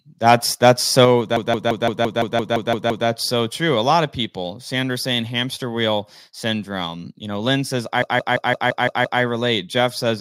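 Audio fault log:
0.26–0.34 s, 0.64–0.71 s, 0.99–1.05 s, microphone overload: The loudest peaks are flattened at the top, pushed about 4 dB past the limit in the first two and about 2 dB in the third. Only a small share of samples is cut. Each burst gets a harsh, crackling edge. The likely cause is input volume set too high for the converter.
1.05 s, microphone volume stepped down: Right after the last distorted peak, the sound and its background drop together by about 5 dB in one step. This likely comes from the call software reacting to the clipping by lowering the device's input volume.
1.37–3.07 s and 8.02–9.22 s, system hang loop: A fragment of about 0.17 s repeats exactly, 10 times in the first stretch and 7 in the second. It gives a machine-gun stutter at about 5.9 per second. The length fits an 8192-sample ring buffer replaying while the system was frozen.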